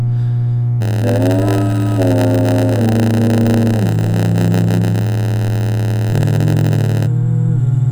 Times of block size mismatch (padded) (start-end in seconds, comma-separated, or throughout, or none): 0.80-7.07